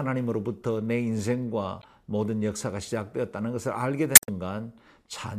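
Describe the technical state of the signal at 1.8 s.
At 1.8 s the speech hits damaged data in a compressed stream, from 1.79 to 1.85 s. Corrupted bytes make the decoder misread frames and lose sync until it finds a valid header, giving a short squawk or blip.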